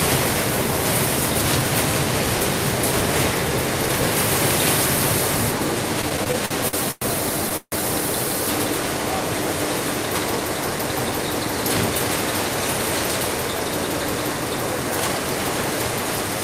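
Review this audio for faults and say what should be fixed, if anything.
From 6.01 to 7.04 s there's a stretch of repeated stalls (stutter). The sound catches nine times, with about 281 ms of filler in total, roughly a quarter of that second. The longest hold is around 103 ms. Each time, the receiver ran out of packets and stretched the last bit of sound until more arrived, so nothing is lost, but it drags and hiccups. A deeper, adaptive jitter buffer and a steadier network path would stop this.

Then at 7.57 s there's a short call audio freeze lasting until 7.75 s. The sound hangs and fades over about 153 ms, with the last 50 ms going silent, and then picks up where it left off, so nothing's missing but everything after it runs 153 ms later. That's likely a burst of packets held up in transit that emptied the buffer completely. More buffer headroom, or prioritising the audio traffic on the network, should prevent it.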